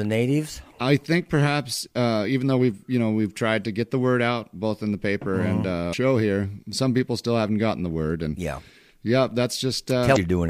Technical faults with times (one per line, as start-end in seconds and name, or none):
5.89-5.94 damaged data in a compressed stream
10.12-10.17 damaged data in a compressed stream